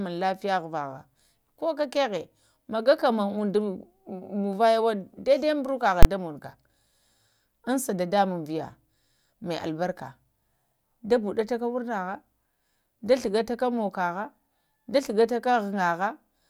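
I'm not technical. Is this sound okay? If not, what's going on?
No. At 6.03 to 6.05 s there is one loud bang. This is invalid numbers at full scale: a calculation failed, and a short block jumped to maximum level.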